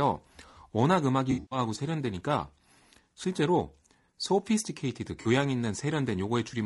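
Speech, rough and grainy throughout with noise between the harmonics and a thin top band, likely low-delay AAC compression (AAC-ELD) at a low bitrate around 32 kbps. AAC frame loss with concealment smears the audio into a noisy, phasey patch from 1.31 to 1.59 s, with the longest gap about a tenth of a second, and again briefly from 5.21 to 5.27 s.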